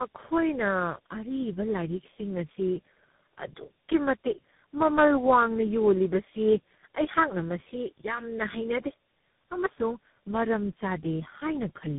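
From start to finish the speech carries tandem speech coding: it sounds as if it passed through about three speech codecs in a row, each re-encoding the previous one's already damaged output. The result is rough, muffled and warbly, with a grainy, noisy edge. On a spectrogram nothing appears above 3.8 kHz, and formant bands look blurred and jittery rather than smooth.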